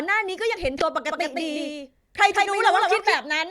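At 0.79 to 0.82 s, compressed frames are skipped: the decoder jumps ahead roughly 150 ms, a span that fits several 20 ms frames. On a spectrogram, the harmonic tracks break and resume.

From 1.09 s to 3.15 s there is a doubled audio track. A full-band copy, about 5 dB quieter, trails the sound by around 150 ms. It has no decay or room colour, and it most likely comes from a second, slower capture path. It starts and stops abruptly. The waveform shows a somewhat quieter repeat of each burst shifted right, and the spectrogram shows ghost harmonics offset in time.

At 2.45 to 2.48 s, another frame skip drops roughly 100 ms, with the same spectrogram discontinuity.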